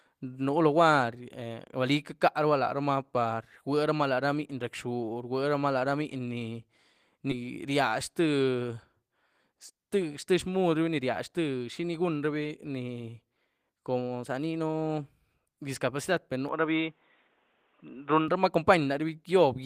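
At 7.31 s there's a skip ahead: something like 400 ms of speech just never made it to playback, probably tossed by an overflowing jitter buffer or lost on the way, so the two sides butt straight together with no gap and you hear an abrupt jump.

From 16.49 to 18.28 s the sound suddenly goes dull and boxy, with nothing above 3.8 kHz, then opens back up. That's likely an input switched to a poorer device. There's no silence at the switch and the level holds steady, but a faint new noise floor sits about 40 dB down.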